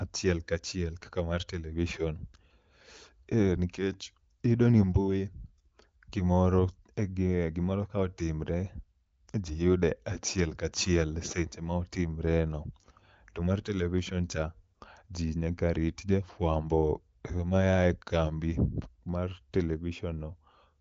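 No technical faults are audible.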